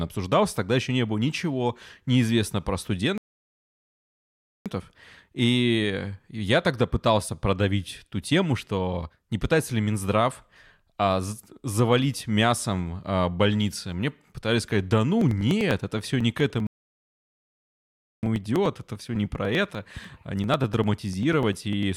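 At 3.18 s the speech cuts to dead silence and picks up again at 4.66 s, right where it left off. That's a rebuffering stall: the player ran dry of downloaded audio and waited for more, so nothing is lost, but about 1.48 s of extra time gets spliced into the timeline.

From 15.21 s to 21.83 s there's a steady run of small ticks, about one every 0.099 s, roughly fifty in total. These are periodic USB or driver dropouts. Something in the background blocks the bus or driver at a fixed interval, and each time around a millisecond of audio is simply skipped rather than padded with silence. That regular spacing is what makes it read as a ticking rhythm over the speech.

A second rebuffering stall lands in the middle of that stretch, from 16.67 s to 18.23 s, adding about 1.56 s of silence before the speech resumes seamlessly. The ticks aren't audible during the gap, since there's no signal for the dropouts to cut into.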